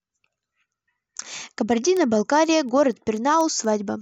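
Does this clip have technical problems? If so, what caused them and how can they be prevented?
Yes. From 0.28 s to 3.89 s the speech carries word clock ticks: around fifteen sharp clicks of uneven strength, roughly five per second. The receiving device runs on its own clock, drifting on the order of 100 ppm from the sender's, so each slip drops or repeats one sample. A spectrogram shows evenly spaced thin vertical broadband lines, and the waveform shows tiny steps at each slip. Lock the receiver to the sender's word clock, or resample through a proper rate converter.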